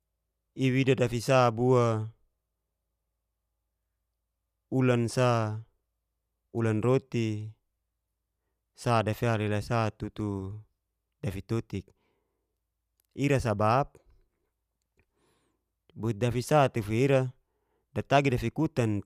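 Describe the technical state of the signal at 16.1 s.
At 16.1 s the speech signal is intact, with no dropout, distortion or other fault audible at that moment.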